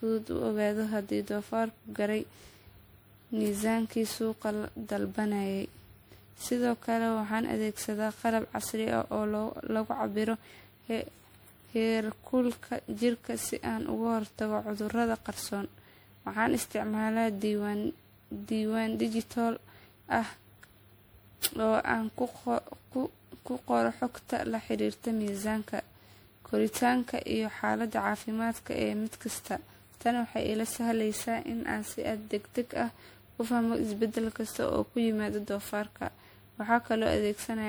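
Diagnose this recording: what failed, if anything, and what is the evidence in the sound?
Swirly, hollow speech with blurred attacks throughout: codec generation loss, likely about ten MP3 passes fitting 96 kbit/s, each re-quantising and compounding noise.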